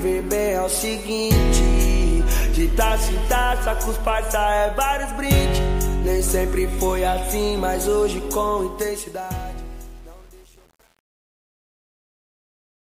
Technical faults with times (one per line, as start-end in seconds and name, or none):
8.62-12.87 truncation distortion on a fade